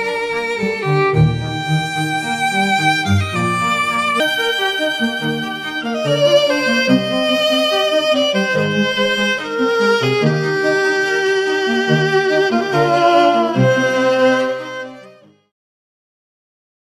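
A section at the wrong speed runs from 4.2 s to the end of the audio: playback jumps to 1.32 times the original rate, so everything turns hurried and rises about five semitones at once, likely from that stretch being played against a mismatched clock.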